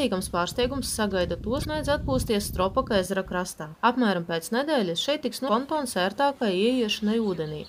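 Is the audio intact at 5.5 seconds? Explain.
No, not quite. Right around there, from about 5.45 to 5.49 s, there's a stretch of damaged data in the compressed stream, about 44 ms of it. Some of the encoded bytes at that point are bad, so the decoder can't read those frames properly, loses sync and hunts for the next valid frame header before it can carry on. What you hear is a short chirp or blip cutting through the sound.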